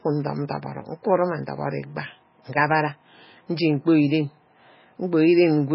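Across the whole speech recording the sound is watery and swirly, with metallic chirps on sibilants and smeared onsets, and nothing is heard above about 5.5 kHz. This points to heavy MP3 compression as the likely cause. Starved of bits, the encoder has cut the treble at a fixed ceiling and dropped quieter frequency lines that flicker in and out between frames. That fits a very low bitrate, around 16 kbps.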